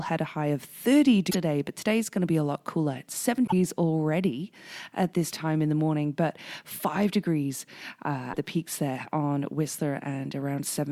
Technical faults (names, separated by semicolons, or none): damaged data in a compressed stream